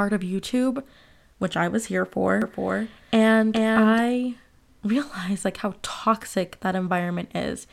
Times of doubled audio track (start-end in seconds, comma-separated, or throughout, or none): 2.42-4.00